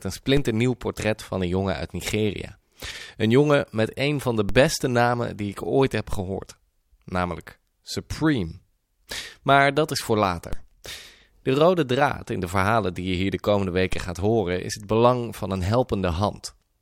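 A DC step hits at 0.37, 4.49 (after "met een van de"), 6.13, 10.53 and 13.93 s. Each time the zero line jumps by about -15 to -17 dBFS, then drains away through a 5 Hz high-pass. Each step is a low thump under steady speech.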